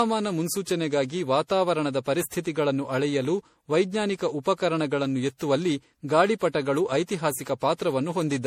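Throughout, the speech has a swirly, hollow, smeared quality with blurred consonant attacks, typical of generation loss. It is likely from about seven rounds of MP3 encoding at around 64 kbit/s, each pass requantising on a shifted frame grid so noise and spectral holes accumulate.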